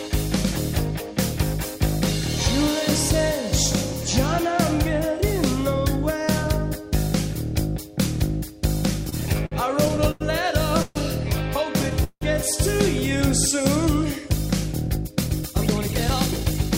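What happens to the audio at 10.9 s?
A call audio freeze runs from 10.82 to 10.97 s: the last sound is stretched into a short fading buzz or hiss for about 130 ms, likely because delayed packets drained the jitter buffer. The audio then resumes where it stopped, nothing lost, just pushed later.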